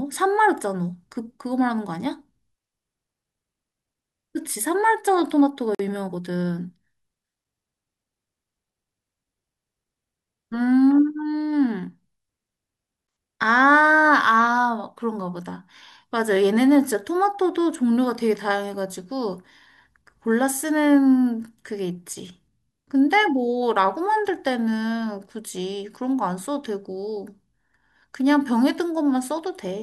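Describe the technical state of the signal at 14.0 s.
At 14.0 s the speech signal is intact, with no audible fault at that moment.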